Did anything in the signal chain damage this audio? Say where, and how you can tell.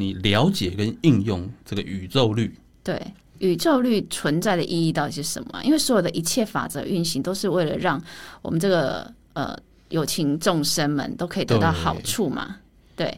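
No, nothing in this speech recording stood out on listening as a sign of damage from any stage of the chain.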